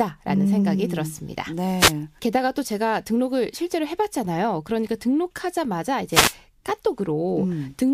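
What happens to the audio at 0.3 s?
Nothing goes wrong at 0.3 s; the speech runs through that moment intact, with no dropout, click or distortion.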